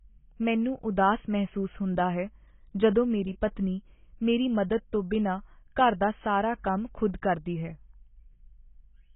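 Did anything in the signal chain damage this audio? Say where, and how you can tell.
Yes. AAC compression damage runs throughout: the speech is dull and smeared, with nothing above 3.8 kHz and a heavy warbling, fizzy texture on sibilants. The likely cause is a codec stage: AAC-LC at a bitrate around 16 kbps lowered the cut-off and coarsely quantised the remaining bands.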